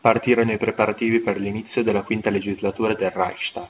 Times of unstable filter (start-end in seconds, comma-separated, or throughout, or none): none